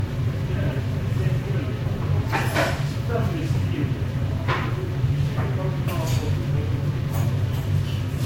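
From start to finish the sound is swirly, smeared and hollow, with blurred attacks and nothing above 16.6 kHz. This is likely generation loss: the audio seems to have been lossy-coded around five times, each pass, fitting Vorbis near 60 kbit/s, adding fresh quantisation damage.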